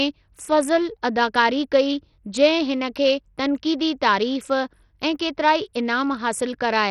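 Speech with Bluetooth SBC compression throughout. The treble flickers, grit and aliasing sit on the sound, nothing passes 19.2 kHz, and the heavy damage fits a likely starved 64 kbps bit pool.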